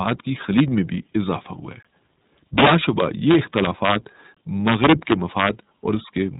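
At 0.09 to 0.11 s the speech hits integer overflow. It is pushed about 2 dB past the largest value the format can hold. The sample does not stop at the limit. It wraps to the opposite sign and jumps across the full range. A sharp crack results, harsher than clipping. A second, briefer crack comes at 0.59 s, about 1 dB over.

At 1.83 to 1.85 s there is a gap between chunks. The audio stops dead for 20 ms, then resumes. Nothing is missing. The sound is just split apart at a join. It reads as a short hole.

From 2.58 to 3.95 s the overflow returns, far worse. Loud passages run about 10 dB over. Peak after peak flips sign, giving a dense run of violent cracks.

At 4.35 to 4.37 s a second 20 ms gap appears. It falls about 2.5 s after the first, which fits audio delivered in 2.5-second chunks.

From 4.68 to 5.49 s overflow strikes again, about 5 dB over. The loud peaks wrap and crack repeatedly.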